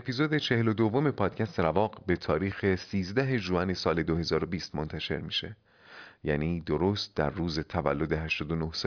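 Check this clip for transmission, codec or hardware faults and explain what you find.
No transmission, codec or hardware fault can be heard in this speech clip. Nothing in it calls for a fault to be explained.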